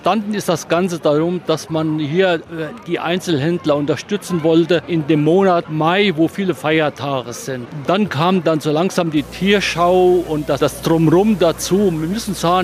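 From 9.17 s to the end of the clip, a video or display buzz appears: a screen or video cable is coupling interference into the audio path, giving a 60 Hz field-rate buzz with harsh hash above it, sitting roughly 20 dB below the programme.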